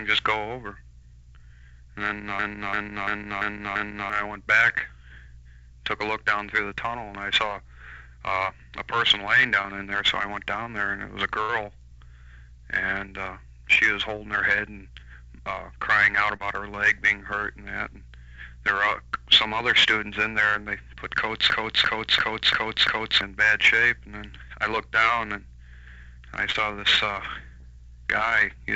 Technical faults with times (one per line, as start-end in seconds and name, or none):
2.39-4.10 system hang loop
9.62-9.66 short concealed packet loss
10.64-10.68 short concealed packet loss
11.42-11.50 burst of packet loss
16.36-16.42 short concealed packet loss
21.50-23.21 system hang loop
26.52-26.57 short concealed packet loss
27.61-27.64 short concealed packet loss